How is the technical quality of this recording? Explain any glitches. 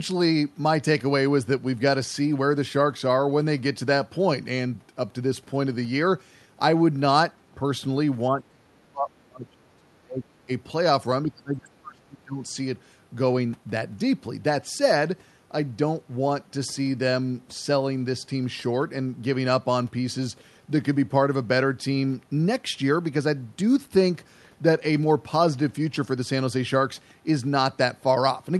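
The talker drops out twice, from 8.3 to 10.49 s and from 11.24 to 12.42 s, because of speech suppressed in double talk. The echo canceller, likely confused by simultaneous talk, couldn't tell the voice from loudspeaker echo and ducked it, by up to about 30 dB and about 25 dB respectively. The audio passes through an Opus call path with highs stopping near 12 kHz.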